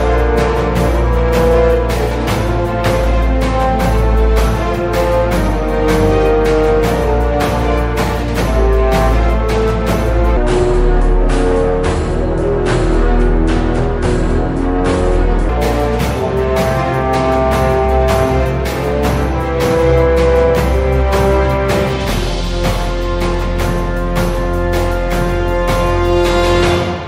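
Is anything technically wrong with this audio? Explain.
Yes. From 10.37 to 15.49 s there's a section at the wrong speed: it runs at about 0.69 times normal, so everything drops roughly seven semitones and drags, deep and slow. Likely it was played against the wrong clock, so speed and pitch shift together.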